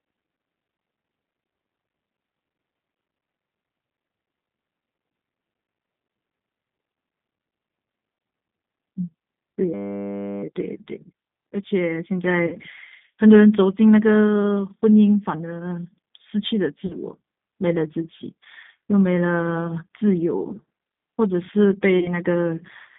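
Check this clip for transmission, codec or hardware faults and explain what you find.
Three kinds of fault are present: a telephone speech codec throughout, a hang loop near 10 s, and three concealed packet-loss dropouts.

G.729 codec, whole clip: the speech is rebuilt from a vocal tract filter, a pitch predictor and sparse pulses, so it sounds rough and slightly synthetic, consistent with 8 kbit/s coding. On a spectrogram the energy sits in a band from 150 Hz to 3.6 kHz, with nothing above.

System hang loop, 9.74 to 10.43 s: the system froze while the sound hardware kept replaying one 10 ms buffer. The result is a steady buzz at 100 Hz. The waveform shows an identical short cycle tiled exactly, and the spectrogram shows harmonic lines spaced 100 Hz apart.

VoIP packet loss concealed by the speech codec, at 12.47 to 12.56 s, 16.86 to 16.96 s and 21.99 to 22.12 s: audio was lost for 50, 40 and 30 ms respectively. 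In each gap the decoder extended its last pitch and filter with falling gain, so the sound smears into a fading buzzy tone or coloured noise. On the spectrogram these gaps appear as frozen, decaying harmonics or noise.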